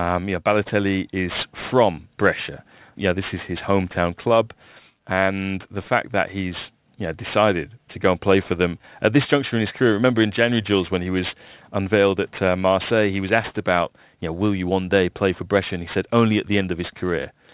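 Gritty, metallic sibilants and a harsh edge run through the whole speech clip, with energy pressed hard against a ceiling near 4 kHz. That is aliasing. The audio fits a drop to an 8 kHz rate without a low-pass filter, so content above 4 kHz folded back down as false tones, some 20 dB below the speech.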